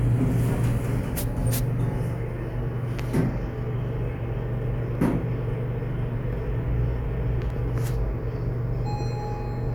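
At 0.67 s and again at 7.50 s there is an underrun with held sample: the output buffer ran dry and the converter held its last value until data arrived. Each hold is brief, 0.67 ms and then 0.88 ms. The waveform shows a short flat step, usually off zero, and the spectrogram shows a thin vertical streak. Because roughly a millisecond of audio was lost each time, the sound picks up slightly past where it left off.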